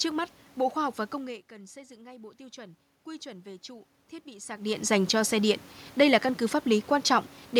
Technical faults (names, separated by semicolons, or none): automatic gain rising